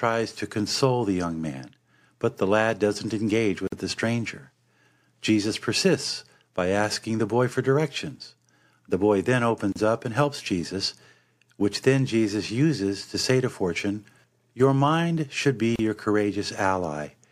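At 3.67 s, right after "the lad doesn't engage" and before "the stranger", the speech drops out for about 50 ms. It happens again at 9.72 s between "boy then" and "up and helps", and at 15.76 s after "mind should be", each time for about 34 ms. The spacing is a steady 6 s, so this is a gap at a join of encoded pieces. Each chunk kept its encoder's leading delay and last-frame padding, and you hear a short hole with smeared edges before the speech picks up where it stopped.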